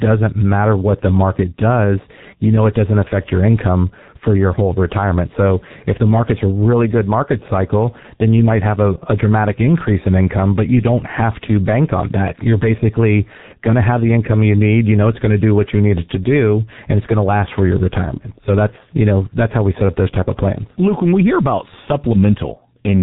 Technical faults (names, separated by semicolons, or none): G.723.1 codec